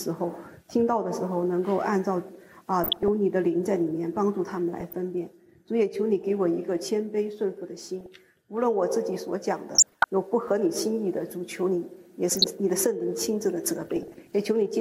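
DAB burbling appears at 2.83–3.08, 4.80–4.94, 8.01–8.14, 9.75–10.06, 12.29–12.46 and 13.97–14.33 s: weak reception lets bit errors slip past error correction, corrupting sub-band samples and scale factors so bands briefly jump, giving short noise blips in single bands, worst around 9.8 s.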